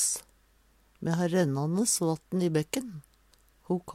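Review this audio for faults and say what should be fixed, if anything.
Nothing to fix; no faults heard anywhere in the clip.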